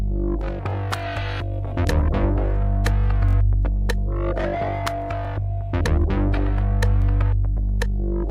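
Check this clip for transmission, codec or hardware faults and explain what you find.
A repeated buffer fault occurs four times, at 0.70–0.73 s, 3.29–3.35 s, 5.25–5.27 s and 7.02–7.04 s. Each time, new audio arrived late and the device replayed its last 21 ms block, which fits a 1024-sample buffer. It repeats once at three points and three times at 3.29 s, giving a brief buzzy stutter with hard joins. Unlike a dropout, there is no silent gap, and nothing seems to be missing.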